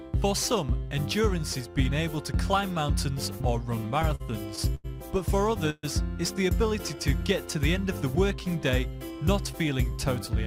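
From 3.75 to 4.86 s the audio has repeated stalls, a stutter. Packets came late, and the jitter buffer ran dry seven times. Each gap was bridged by stretching the last sound, the longest for 90 ms, 186 ms in all. Nothing is lost. The sound drags and hitches.

At 5.70 s there is a call audio freeze lasting until 5.85 s. The last sound is held and fades, with about 30 ms of silence at the end. Then the audio resumes where it stopped, 132 ms later than before. Packets were likely held up in transit.

From 9.11 to 10.44 s a jitter buffer speed-up plays the audio at 104% speed. The buffer had built up extra delay. Tiny pitch-period slices, around 50 ms in total, were cut out. Pitch stays the same, and the pace is only slightly faster.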